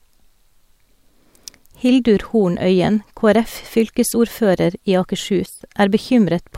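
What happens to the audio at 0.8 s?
Nothing goes wrong at 0.8 s; the speech carries on intact through that moment, with no dropout, click or distortion.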